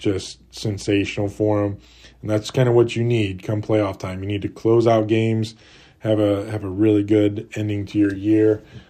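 No technical faults can be heard anywhere in the speech recording, and the signal stays steady and intact throughout.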